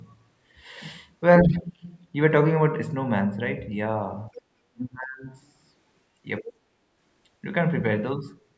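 Speech dips by roughly 30 dB from 1.43 to 1.87 s and by about 15 dB at 4.30 to 4.34 s, likely speech suppressed in double talk, with the echo canceller attenuating the talker while both sides speak. From 4.34 to 4.41 s a second voice, about 20 dB below the speech, is likely the other side's voice leaking through where the canceller missed residual loudspeaker echo. The talker is suppressed again by roughly 30 dB from 4.72 to 5.28 s, and the leaked voice returns from 6.38 to 6.52 s.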